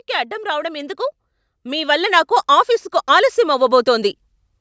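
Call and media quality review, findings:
Automatic gain rising, 1.63–2.4 s and 3.07–4.22 s: speech and background noise swell together by about 4 dB, then about 5 dB. AGC sees input as too quiet and ramps gain up slowly. Waveform envelope and spectrogram noise floor both climb steadily across each span. Call mic processing band-limits at 8 kHz, as expected.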